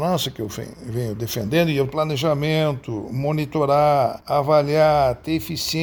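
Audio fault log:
No faults can be heard anywhere in this recording.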